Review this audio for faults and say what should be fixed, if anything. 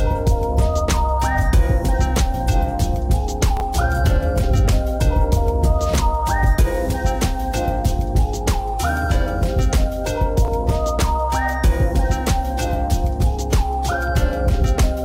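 Chunks out of order at 3.57 s and 10.45 s: a 10 ms chunk plays three, then two, chunks late, causing a jumbled moment without the gap a dropout leaves. Prevent it by buffering and reordering chunks by sequence number before playback.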